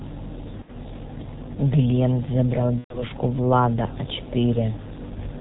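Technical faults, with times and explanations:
Throughout: G.723.1 codec. The audio has passed through a very low-rate telephony coder, and its sound points to roughly 6 kbit/s. It keeps nothing above 4 kHz and refreshes its model of the vocal tract only once every 30 ms frame, so the damage here is heavy. The speech is dull and muffled, with a rough, hoarse edge, and quick consonants smear into one another instead of landing crisply.
0.62–0.72 s and 2.78–3.06 s: VoIP packet loss concealed by the speech codec. Packets went missing twice. The first gap is about 60 ms and the second about 120 ms, which fits two and then four lost 30 ms frames. The decoder covered each gap by replaying its last pitch and filter at falling gain, so the speech turns into a fading buzzy or noisy smear. Because each frame builds on the one before, the sound stays weak and distorted briefly after it resumes.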